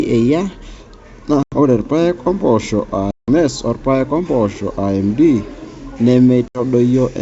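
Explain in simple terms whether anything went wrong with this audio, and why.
Packet loss on an ADPCM call: chunks of the call's data never arrived, and the decoder lost track of how the sound was changing. You hear abrupt silent gaps at 1.43, 3.11 and 6.48 seconds, lasting 90, 170 and 70 milliseconds. Right after the first gap, at "ore irpaek ompoosho", speech returns with brief roughness.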